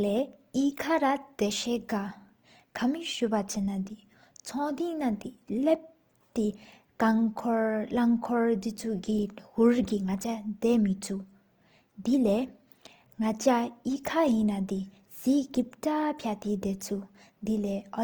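Throughout the speech, tonal parts sound grainy, rough and noisy rather than swirly, while content still reaches 20.2 kHz. This is likely Opus compression in CELT mode, filling bit-starved bands with folded or noise energy, which fits a bitrate near 24 kbps.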